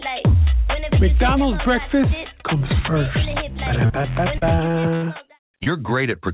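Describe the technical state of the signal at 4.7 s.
At 4.7 s the sound is inside a stretch of repeated packet loss (robotic sound) running from 3.86 to 5.68 s. Nine short holes, the longest 66 ms, are each patched by stretching the preceding sound. About 14% of the stretch is concealed, giving a choppy texture with pieces missing above a band that already stops at 4 kHz.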